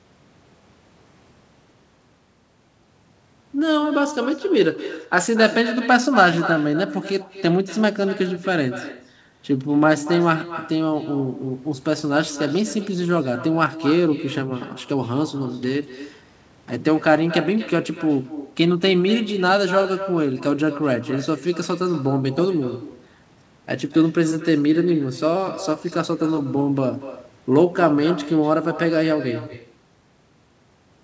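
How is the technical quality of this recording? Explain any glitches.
The recording has one clear fault: an uncancelled echo across the whole clip, heard through a call path whose content stops at 8 kHz, which fits a wideband G.722-type codec. Echo with no canceller: throughout, each phrase returns about a fifth of a second later, roughly 13 dB quieter and thinner. The far end's loudspeaker fed its microphone, and nothing subtracted it. A spectrogram shows faint, delayed duplicates of every syllable, and the waveform shows small trailing copies.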